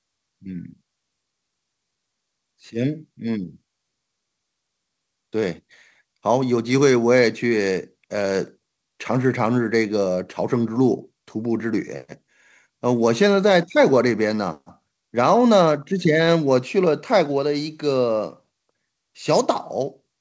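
No technical faults occur in this speech recording, which carries the ordinary band limit of a wideband call path, with nothing above 8 kHz.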